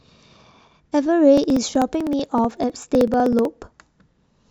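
From 1.38 s to 3.45 s, regular ticks cut through the speech every 0.063 s, roughly sixteen a second. These are periodic USB or driver dropouts: something stalls the audio path at a fixed interval, and each time around a millisecond of sound is skipped outright.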